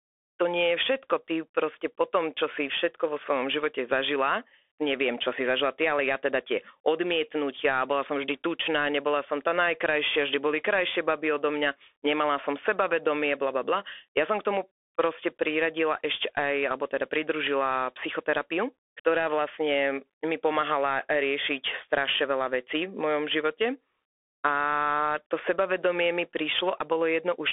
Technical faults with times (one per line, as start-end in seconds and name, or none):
0.00-27.53 Bluetooth CVSD headset codec